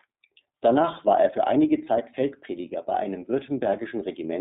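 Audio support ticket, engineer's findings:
iLBC codec, throughout. Narrowband line: nothing below 150 Hz or above 3.7 kHz. Rough, slightly synthetic speech texture, plainly audible. Each frame's excitation coded independently, fitting 30 ms frames and the 13.33 kbps mode. Probable component: VoIP leg or gateway transcoding to iLBC. Check codec negotiation; prefer a wideband codec if the endpoints support one.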